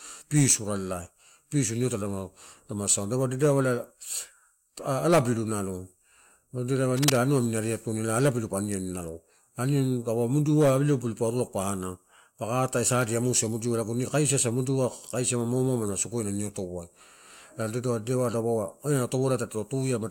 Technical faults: cable scratch noise

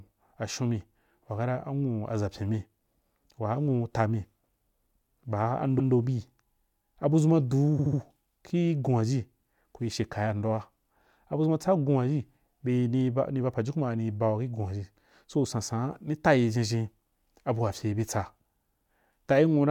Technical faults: repeated frames

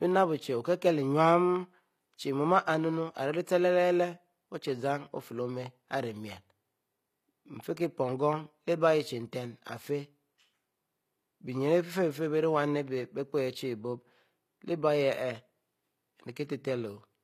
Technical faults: HE-AAC compression

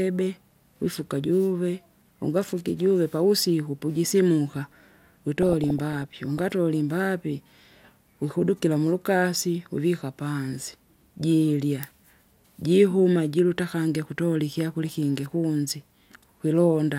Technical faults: DAB burbling

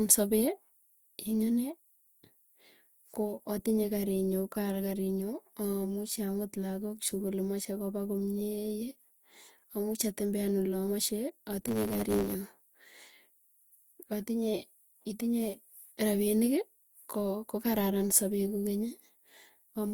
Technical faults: block size mismatch (truncated)

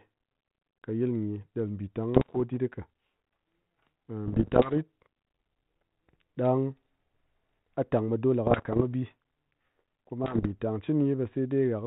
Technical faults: bit errors on an ADPCM link

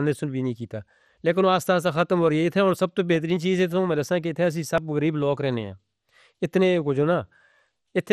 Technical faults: MP2 compression; dropped buffer (overrun)

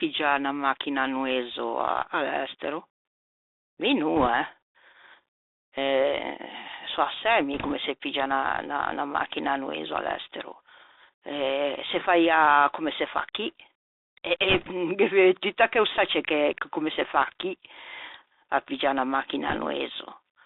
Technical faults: Bluetooth CVSD headset codec; bit errors on a Bluetooth voice link

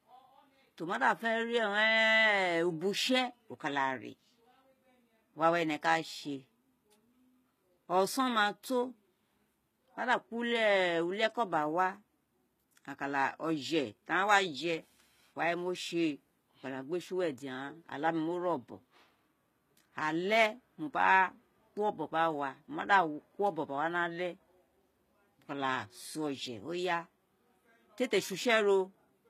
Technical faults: HE-AAC compression

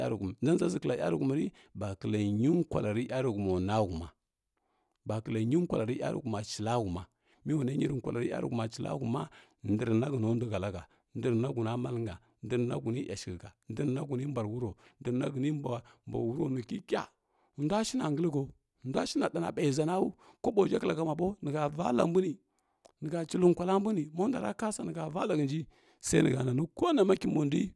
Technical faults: none

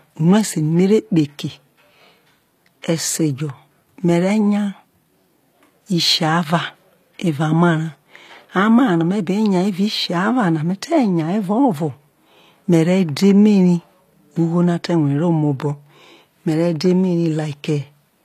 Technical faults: HE-AAC compression

